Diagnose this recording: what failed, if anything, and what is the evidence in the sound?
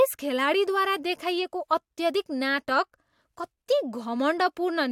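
Nothing failed; no stage leaves any audible trace here.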